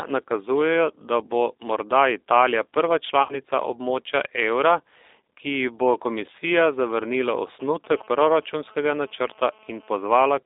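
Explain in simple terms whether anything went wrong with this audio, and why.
The speech sounds thin, slightly rough and synthetic all the way through, with no crisp highs above about 3.7 kHz. That is the G.729 codec, a low-rate phone-call codec that rebuilds speech from a rough model of the voice rather than sending the actual sound.

From 3.23 to 3.40 s the sound briefly smears and fades, then takes a moment to recover. This is VoIP packet loss concealed by the speech codec. About 60 ms of audio went missing, and the decoder filled the gap by stretching the last sound it had.

From 7.95 to 10.13 s a hard, raspy buzz sits underneath the speech. This is GSM phone buzz. A nearby 2G phone on a call sends radio bursts 217 times a second, and the audio equipment picked them up and turned them into that steady buzz.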